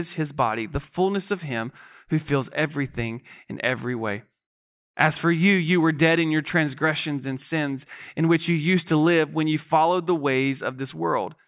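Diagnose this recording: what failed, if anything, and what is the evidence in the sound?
Nothing failed; no fault can be heard in this speech.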